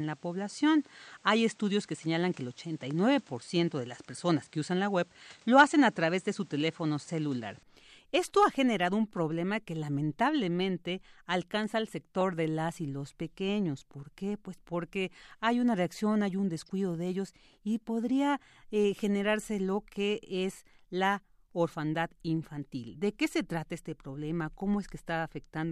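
From 0.0 to 7.63 s the speech is dull, with nothing above 9.5 kHz and faint extra noise well below it. At 7.63 s it clears abruptly, with no gap or level jump. That pattern likely points to an input switched to a poorer device, rather than a steady filter.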